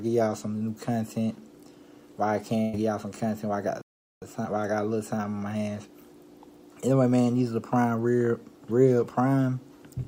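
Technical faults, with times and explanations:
2.61 to 2.75 s, burst of packet loss: about 120 ms lost, concealed by stretching the last sound and fading it, then a jump; spectrogram shows the last sound held and dimming.
3.81 to 4.22 s, playback stall: output falls silent for about 400 ms, likely a starved or blocked player; waveform shows a flat gap, spectrogram a blank column.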